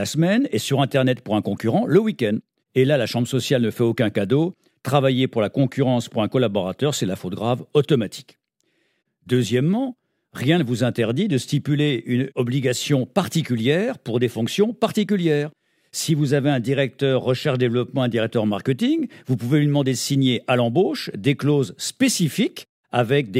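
Listening through this speech recording, nothing stood out as a technical problem.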